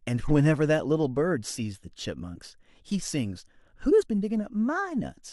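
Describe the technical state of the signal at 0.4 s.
At 0.4 s the signal is intact, with no dropout, distortion or other fault audible at that point.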